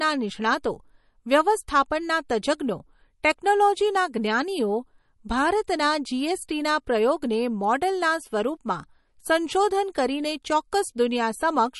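Throughout the speech, nothing sounds above 11.6 kHz, and the sound is plainly watery and swirly, with chirpy s sounds, likely MP3 compression at a low bitrate near 40 kbps; unlike a plain low-pass filter, the swirl gives it away.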